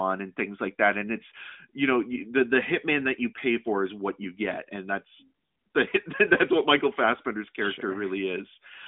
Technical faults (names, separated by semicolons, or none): none